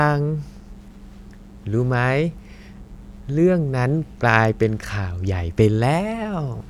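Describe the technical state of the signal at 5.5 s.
At 5.5 s a steady, raspy buzz sits under the speech, roughly 30 dB down, as it does for the whole clip. This is mains buzz: sharp switching spikes at twice the 60 Hz mains rate leak in, spreading harmonics up to several kHz.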